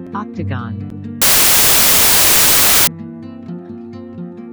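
Between 1.22 and 2.87 s the audio was written as packed 24-bit integers but read back as 16-bit, a wrong sample width. Each 3-byte sample gets split across mismatched 2-byte reads, so most values mix unrelated bytes, and only some still carry the signal's top bits. That section turns into loud, harsh noise with the original sound faint underneath, slowed to about 0.67 times its speed and dropped in pitch to match.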